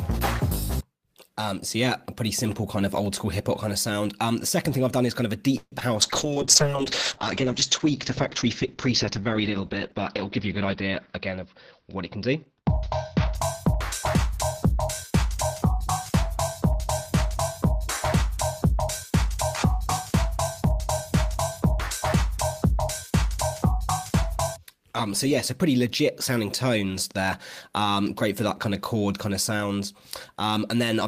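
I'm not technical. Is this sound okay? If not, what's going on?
No. Four separate problems can be heard in the sound.

Call audio freeze, 5.57 to 5.74 s: the data carrying the call was likely held up on its way, and the receiver ran out of sound to play. It stretched the last bit of sound into a short fading buzz, with about 40 ms of near silence, then carried on where it had stopped. Nothing is lost, but a pause of roughly 0.14 s has been inserted.

Short concealed packet loss, 5.80 to 5.94 s: a small piece of the call, about 20 ms, never arrived in time. The receiver patched the hole by guessing, continuing the previous sound for a moment and then blending back into the real signal. You hear this as a brief smear or wobble, and whatever fell in that gap is gone rather than delayed.

Call bitrate drop, 6.03 to 13.47 s: the connection judged itself short of capacity, so the system switched to a much thinner version of the sound for about seven seconds, at its leanest for about 4.5 s. 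To save space it discards detail and everything above about 6 kHz. The sound becomes dull, muffled and rough until quality returns.

Jitter buffer speed-up, 10.65 to 11.46 s and 12.16 to 15.25 s: after the delay, the receiver had more sound queued than it wanted. To catch up, it quietly snipped out many tiny slices, about 50 ms in the first stretch and about 100 ms in the second. That makes the sound play about 5% and then 3% faster at the same pitch, so the first stretch sounds hurried.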